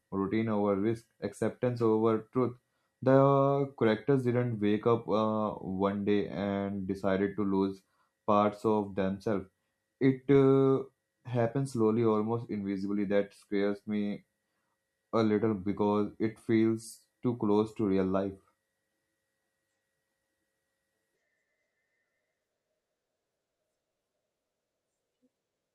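Listening to the speech recording, nothing technical stood out at any point.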